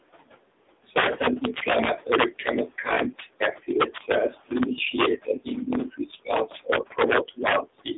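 Integer overflow runs through the whole clip: loud peaks pushed about 6 dB past full scale wrap to the opposite sign, giving sharp cracks and vertical spikes flipping across the waveform.

Noise suppressor artifacts are present throughout as well. The room noise is pulled down by about 17 dB between phrases and returns under the speech, seen as patchy, blinking low-level texture on a spectrogram.

The AMR narrowband mobile codec shapes everything. Its heavy damage, which fits a low mode near 6.7 kbps, makes the speech buzzy and synthetic. A spectrogram shows a hard ceiling near 3.8 kHz with little below 250 Hz.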